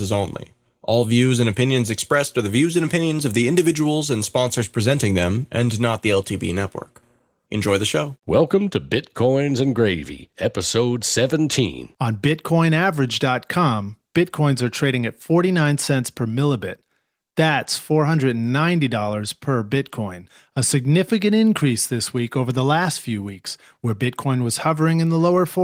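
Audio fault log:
No faults found; the speech carries Opus voice compression in fullband hybrid mode at about 24 kbps, with only the light coding wear expected at that rate.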